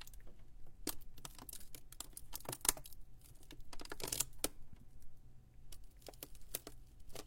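Listening to this recording of sounds, nothing technical stood out as wrong at any point.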